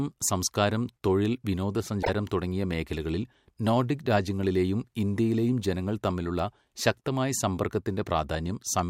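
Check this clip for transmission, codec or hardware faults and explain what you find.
One codec fault is present: a corrupt frame decoded. It runs from 2.03 to 2.09 s, ending just before "തുടങ്ങിയ മേഖലകളിൽ നോഡിക് രാജ്യങ്ങളിലേയും". Some bits in the compressed data were damaged. The decoder still played the affected frames, a few in a row. Misread gains and codes scattered energy into the wrong frequencies for about 60 ms. The result is a brief glitch laid over the speech. It peaks fairly loud, at about -10 dBFS.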